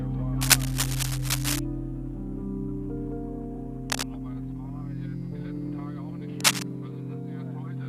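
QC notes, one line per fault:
0.41–1.59 s, cable scratch noise: a burst of dense, irregular crackle and rustle sits roughly 5 dB above the sound, likely a worn connector or lead being moved so its contact resistance fluctuates quickly.
3.90–4.06 s, cable scratch noise: a short scrape at about the level of the sound, with the same likely contact cause.
6.40–6.65 s, cable scratch noise: the loudest burst, roughly 10 dB above the sound, likely from an intermittent contact disturbed again.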